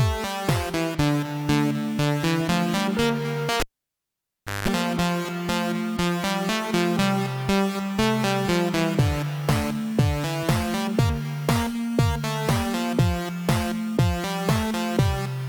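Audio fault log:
3.60–4.68 s, cable pulled and plugged in: a pop, then about a second of near silence with the lead out, then 0.19 s of 50 Hz mains buzz while only the plug tip touches, and a second pop as the full connection returns.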